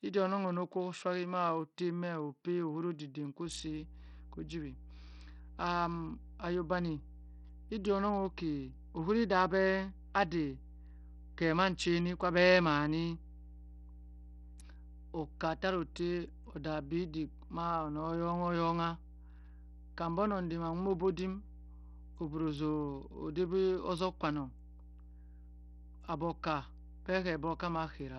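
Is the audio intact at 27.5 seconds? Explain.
No. At 27.5 s a steady 60 Hz mains hum sits under the speech, present from 3.45 s to the end. It comes from power-line coupling through a ground loop or nearby transformer and runs roughly 20 dB below the speech. The whole clip also carries heavy damage, likely from Bluetooth SBC compression. The treble thins and flickers, and gritty noise rides on the speech, which fits coarse sub-band quantisation at a low bitrate of around 64 kbps.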